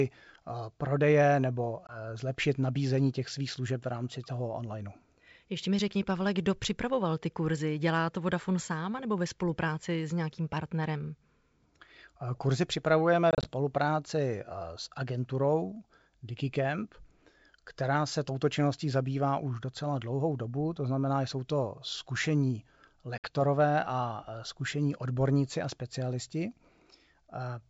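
Speech on a G.722 wideband call is broken by hard-edged silent gaps at 1.87 s, in scattered short bursts across 13.31–13.48 s, and at 23.18 s. Each is followed by slightly distorted speech that settles quickly. This is packet loss on an ADPCM call, where lost packets leave the decoder's predictor and step size out of step with the sender's.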